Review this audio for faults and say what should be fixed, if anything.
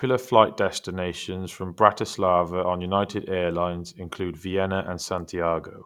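Nothing here needs fixing, as no faults turn up anywhere in this speech clip.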